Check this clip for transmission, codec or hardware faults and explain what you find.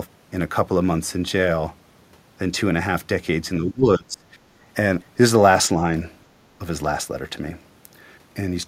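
Two faults stand out, both tied to echo cancellation on the transmitting side.

Speech suppressed in double talk, from 3.6 to 4.24 s. The speech sinks sharply here, by something like 25 dB at its deepest, across roughly half a second of that window. The likely cause is an echo canceller that heard far-end audio arriving at the same moment as the local talker, failed to tell the two apart, and pulled its gain down on everything.

Background gated by the echo canceller, from 4.52 to 4.56 s. For about 40 ms the room sound ducks by about 8 dB, then returns. The canceller clamped the microphone hard while loudspeaker output was present, treating the ambient bed as echo to remove, and released it when it let go. It is heard as a brief hole in the background.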